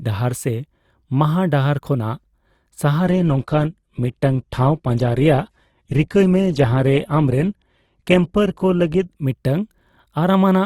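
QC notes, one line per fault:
3.05 to 9.05 s, adaptive stream at a lower bitrate: the player switched to a much leaner version of the stream for six seconds, probably because the connection slowed, then switched back. The sound fits a step down from around 64 kbit/s Opus to around 12 kbit/s. At 3.05 s the speech turns duller, with nothing above 12.2 kHz and more codec artefacts. There is no gap at either switch, only an abrupt change in quality.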